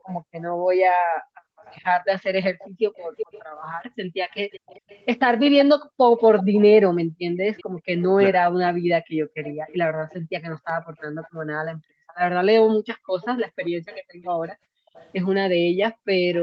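Background gated by the echo canceller, from 0.0 to 4.21 s: the room sound drops away while the far end's loudspeaker is active, sinking by about 40 dB at its deepest and adding up to around two seconds of missing ambience across that span. The canceller clamped the microphone to stop echo going back, and in doing so removed the background too. It pumps back in each time the suppression releases.

Echo leak, from 0.08 to 11.35 s: a faint delayed copy of the speech trails the original by 374 ms, sitting roughly 20 dB below it. The likely cause is a loudspeaker-side echo canceller that did not fully subtract what its microphone picked up, so the residue travelled back.

Background gated by the echo canceller again from 5.79 s to the end at 16.43 s: the same clamping returns, with the room tone dipping by up to about 40 dB whenever playback is detected.

Speech suppressed in double talk, from 8.16 to 8.55 s: the near talker's voice drops by around 30 dB for roughly a third of a second in total. 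This likely happened because both sides spoke at once and the canceller could not tell local speech from loudspeaker echo, so it turned both down.

Echo leak, from 13.21 s to the end: the delayed copy reappears at 397 ms, roughly 25 dB under the speech. The likely cause is the same incomplete echo cancellation on the loudspeaker side. This later echo is quieter.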